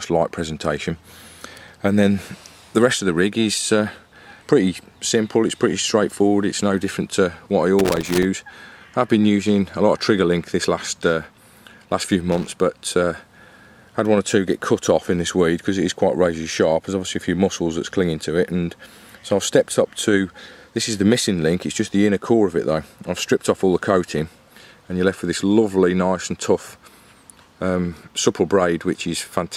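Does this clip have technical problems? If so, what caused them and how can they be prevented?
Yes. Loose connector crackle breaks in twice, from 7.79 to 8.25 s and again from 12.32 to 12.53 s. Each burst is irregular and scratchy. A worn or dirty contact in the signal path is making and breaking as it shifts. That chops the audio on and off in rapid bursts. Any DC on the line turns each break into a pop. Cleaning or replacing the connector and securing the cable against movement prevents it.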